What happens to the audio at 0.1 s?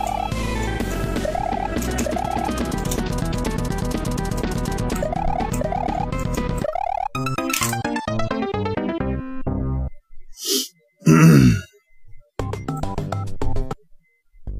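Nothing goes wrong at 0.1 s; the audio is intact at that point.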